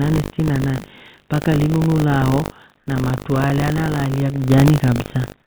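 From the first moment to the end, the speech carries a steady 50 Hz robotic buzz, the signature of buffer tearing. The writer filling the ring buffer and the hardware draining it have drifted so they cross inside every period, so each 20 ms chunk ends up with a small slice, somewhere around 7 percent, of audio from roughly 70 ms earlier, butted against the fresh audio with hard joins. That repeating splice is the rattle, and it rides on the speech itself, so it is only there while there's signal.

Between 2.78 and 2.87 s, right after "mpaka linu nulaao" and just before "na tru alya na", the background drops out for about 90 ms. It is replaced by flat, featureless hiss about 4 dB quieter than the real room sound, which was already sitting about 42 dB below the loudest speech. This is most likely comfort noise in place of the background. The sender's voice detector treated the gap as silence and stopped transmitting, and the receiver filled the hole with synthetic noise roughly matched to the background.

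Through the call path the G.711 mu-law coding leaves nothing above 4 kHz, giving the whole clip its narrowband phone-line colour.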